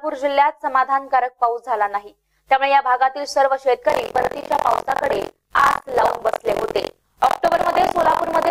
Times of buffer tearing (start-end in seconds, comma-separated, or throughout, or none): 3.88-8.50